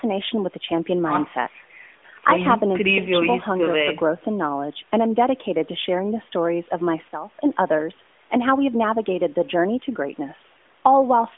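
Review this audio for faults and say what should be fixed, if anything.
At 2.98 s the speech and its background noise drop together by about 13 dB in a single step, then jump back up at 3.13 s. That's a sudden gain jump, likely from a gain setting being applied instantly with no ramp. Smoothing every gain change over a few milliseconds would keep this from happening.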